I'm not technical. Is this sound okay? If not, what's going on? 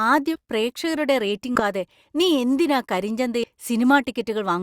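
No. Compressed frames are skipped at 0.35, 1.55 and 3.43 seconds: small chunks of the recording go missing, so the speech briefly jumps ahead.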